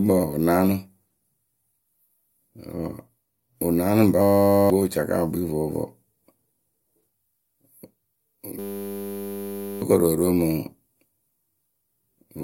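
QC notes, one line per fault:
4.22–4.70 s: system hang loop. After "wɨ naanɨ", playback freezes on one 10 ms piece of audio and repeats it until "wɨ caka wɨ". The exact repetition at 100 Hz sounds like a steady buzz. About half a second of speech is lost.
8.59–9.82 s: system hang loop. The same 10 ms loop returns and buzzes at 100 Hz for over a second before "koru oro mɨŋ". The hung system keeps cycling a tiny ring buffer. Roughly one and a half seconds of speech is missing.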